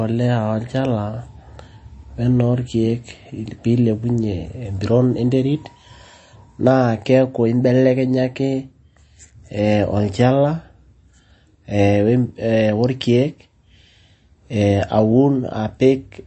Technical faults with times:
0.00-16.27 MP3 compression

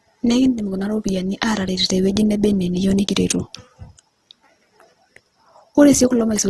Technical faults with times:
0.00-6.50 Opus compression

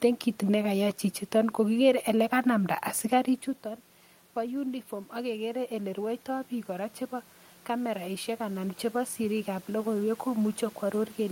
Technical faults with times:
4.35-7.02 automatic gain rising
7.67-11.21 automatic gain rising

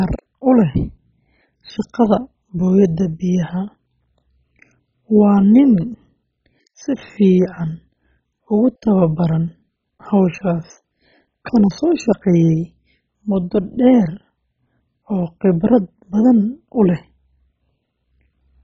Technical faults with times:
0.00-18.64 MP2 compression

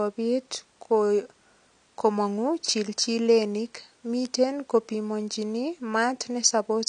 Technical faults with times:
0.00-6.89 AAC compression
4.25 bit error spike
6.44 bit error spike

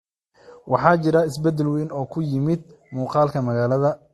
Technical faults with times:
0.00-4.14 transcoding between lossy codecs

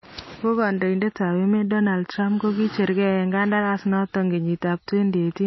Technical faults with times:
0.00-5.46 MP3 compression

